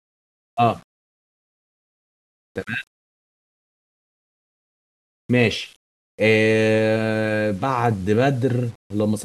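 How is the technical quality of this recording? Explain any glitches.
The speech carries a grainy, gritty distortion the whole way through that tracks the signal. Quiet stretches sputter or fall to silence, with the grit roughly 35 dB below the voice. The likely cause is low bit depth without dither, which fits 8-bit rounding.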